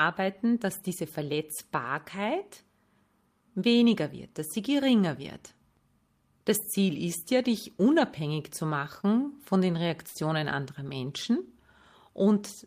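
A short stall from a late packet occurs twice in this speech clip, at 9.88 to 9.93 s and again at 10.08 to 10.18 s. Each time a packet arrived after it was due, the jitter buffer emptied, and the receiver held the last sound for 18 ms and then 72 ms until the packet turned up. Playback resumed where it left off, so nothing is lost, but the sound drags with a slight buzz or dip, and the delay grows by those amounts.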